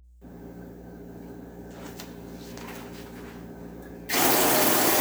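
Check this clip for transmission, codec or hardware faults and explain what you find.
A hardware fault is present: mains hum runs through the entire clip. A ground loop or nearby transformer has coupled the 60 Hz power line into the signal, adding a steady low drone with some low harmonics, sitting roughly 25 dB below the sound.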